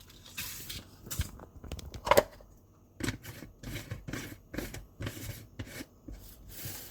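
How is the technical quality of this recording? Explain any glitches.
The recording has one clear fault, present throughout: generation loss.

Generation loss runs the full length of the clip. The sound is swirly and hollow, with smeared attacks and a watery texture that seems heavier than a single pass at a moderate bitrate would leave. The likely cause is repeated lossy encoding, something like seven passes through an Opus-type codec at around 64 kbit/s. Each re-encode quantises on a shifted frame grid, so the noise piles up. There is nothing above about 20.2 kHz.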